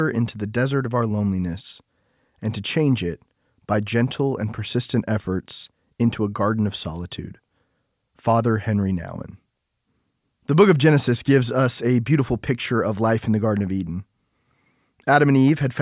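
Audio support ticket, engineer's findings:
Nothing to flag here, the speech comes across steady with no audible faults anywhere in the recording, so no component or mechanism to chase on this one.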